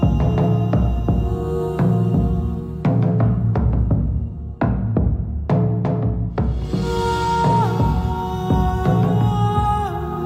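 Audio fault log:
No faults detected in this clip.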